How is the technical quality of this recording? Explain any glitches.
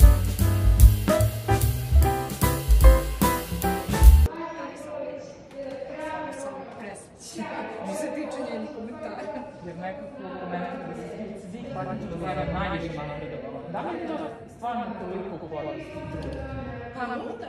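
There's one real problem, and it sits in the last stretch. From 10.29 s to the end, you get a doubled audio track: a second copy of the sound, about as loud as the first, trailing roughly a tenth of a second behind. It's likely a second capture through a slower path, or an edit left two copies out of step. The copy kicks in abruptly, with no decay or room colour, so everything turns into a dry, slappy double.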